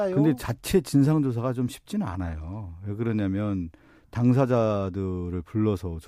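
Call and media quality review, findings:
No faults found in recording.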